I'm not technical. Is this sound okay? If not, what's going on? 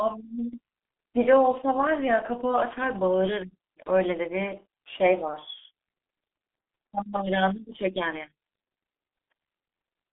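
No. From start to finish the speech sounds muffled and hoarse, with smeared consonants. This is the G.723.1 codec, an early internet-phone format that squeezes the voice heavily, drops everything above about 3.5 kHz, and rebuilds speech from a slowly updated rough model.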